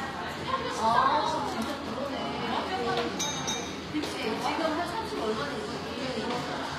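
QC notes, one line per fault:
Throughout: HE-AAC compression. The treble is gritty and metallic, with hissy transients sounding lispy, and nothing is present above 14.9 kHz. This likely comes from spectral band replication: the upper band is copied up from lower frequencies and shaped by a coarse envelope rather than coded directly, so its detail and harmonics don't line up with the real content. The plainly audible damage fits a bitrate around 24 kbps.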